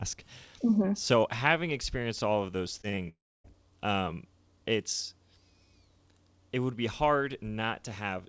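Speech over a call link, with nothing above 8 kHz from the G.722 codec, breaks up just after "experienced all of those." Short concealed packet loss appears as three quick smears at 2.82–2.85, 2.89–2.95 and 2.95–2.99 s, each filled in from the preceding sound. A long network dropout follows from 3.09 to 3.46 s, likely caused by audio failing to arrive. Unlike those blips, it trails a fading buzz into roughly 0.28 s of silence before the audio resumes with material lost.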